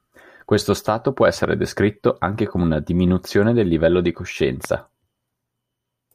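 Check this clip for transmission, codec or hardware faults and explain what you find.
Two loud pops in this speech clip. The first hits at 1.44 s, right after "stato può", and the second at 4.65 s, just after "diminuzione del livello di". Each is a single sharp click peaking about 10 dB above the speech, which carries on underneath. The likely cause is a brief voltage spike, from a plug, switch, static or driver glitch, that got summed into the signal.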